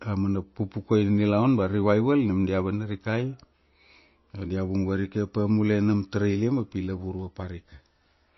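Speech, and the whole thing carries plainly audible MP3 compression damage, likely from a low-bitrate encode around 25 kbps. Nothing survives above 5.8 kHz, and with bits that scarce the weaker frequency lines drop in and out between frames, giving that watery swirl.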